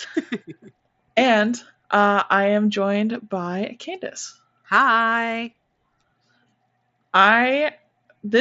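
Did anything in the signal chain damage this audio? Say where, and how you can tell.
No, the speech arrives intact through what sounds like a Bluetooth mSBC headset link, with the band topping out around 8 kHz as that wideband codec allows and nothing in the chain breaking the signal.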